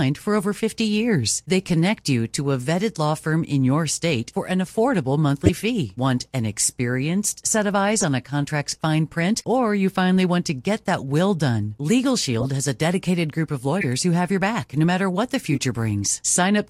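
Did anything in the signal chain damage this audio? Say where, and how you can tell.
Yes. At the codec decoding stage, a corrupt frame was decoded six times: at 5.44–5.50, 7.98–8.04, 9.42–9.44, 12.40–12.45, 13.77–13.86 and 15.50–15.58 s. Each event is a short chirp or noise burst lasting tens of milliseconds, which fits a few frames each, with a longer run at 13.77 s. The bursts at 5.44 and 7.98 s peak around -5 dBFS. The one at 9.42 s is very faint. Damaged bits gave the decoder wrong gains and codes, so it placed energy at unrelated frequencies. Packet-loss concealment would instead sound smooth or muted, not a bright burst of noise.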